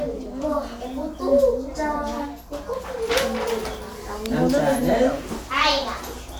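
At 4.26 s a sharp snap cuts across the sound, an electrical switching spike. It is most likely a nearby switch, motor or static discharge arcing and coupling a burst of energy into the audio line. The snap peaks fairly high, at about -10 dBFS, and lasts only a few milliseconds. In the waveform it shows as a narrow, jagged spike. On a spectrogram it is a thin vertical line spanning nearly the whole frequency range.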